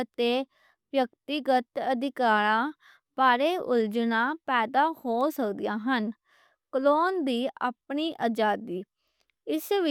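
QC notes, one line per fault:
5.21 s and 7.38 s, bit error spike: two isolated sharp ticks, one just after "پیدا ہو" at about -29 dBFS and one just before "اپنی آزادی" at about -35 dBFS. Each is a flipped bit that throws a sample or two off by a power of two, then snaps straight back. Unlike a dropout or edit click, there is no gap and no waveform step. The tick is broadband and unrelated to the speech around it.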